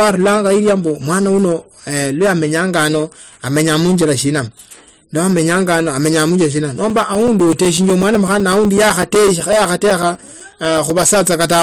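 A stage in the recording chain is driven about 14 dB past its ceiling for the whole of this speech clip, so hard clipping flattens roughly a tenth of the samples. The squared-off peaks add high harmonics, heard as a harsh fuzz on every loud syllable. From 6.9 s to 11.03 s, periodic USB or driver dropouts occur as something stalls the audio path every 0.125 s. Each stall replaces a few milliseconds of signal with silence, about thirty times, giving a steady eight-per-second ticking under the speech.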